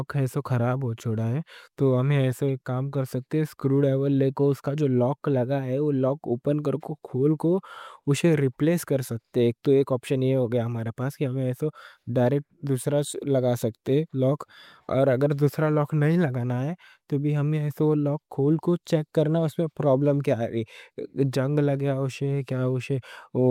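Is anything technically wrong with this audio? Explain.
Yes. From 8.32 to 8.34 s, a corrupt frame decoded: flipped bits in a single compressed frame misdirected its gains and codes, so energy lands at wrong frequencies, heard as a brief chirp, squeak, blip or burst of noise. A spectrogram shows a short, out-of-place vertical smear; the waveform shows a momentary jagged burst.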